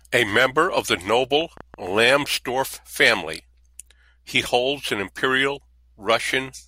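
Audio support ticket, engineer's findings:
Train of clicks, 1.41 to 2.61 s. Likely cause: interference from nearby equipment or a faulty connection injecting repeated pulses. About 5.9 clicks/s at irregular spacing, around seven in total, peaking a few dB above the speech. Heard as uneven ticking laid over the talker for just over a second, with each pulse similar in shape.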